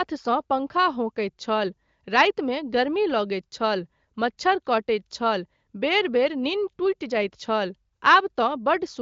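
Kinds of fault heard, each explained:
No kinds of fault are heard in this speech clip.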